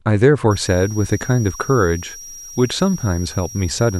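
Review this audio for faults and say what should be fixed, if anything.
Switching supply whistle from 0.51 s to the end at 3.99 s: a thin high tone wanders between 5.65 and 5.73 kHz, roughly 20 dB below the speech, as a switching regulator drops into audible burst-mode cycling or beats against another converter. Preventing it means using a supply that stays above audio frequencies under light load, or filtering and separating the audio rail from the converter.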